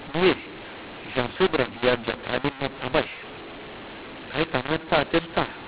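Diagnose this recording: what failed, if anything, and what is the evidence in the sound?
The failure is at the codec stage: a mu-law and A-law mix-up for the whole clip, with mu-law bytes from the G.711 telephone path decoded as A-law. Sample levels are scrambled, so the speech sounds harsh and gritty, and pauses fill with hiss. The waveform shows misshapen, uneven peaks and a raised noise floor where silence should be. The spectrogram shows broadband distortion filling the band up to the normal 4 kHz G.711 ceiling.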